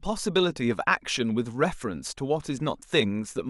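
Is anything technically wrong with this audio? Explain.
Yes. At 2.83 s the speech jumps abruptly forward with a brief click, most likely a stream segment skipped: one chunk failed to load and playback resumed at the next. The waveform shows a hard discontinuity there, and the spectrogram a thin vertical broadband line where the speech changes without transition.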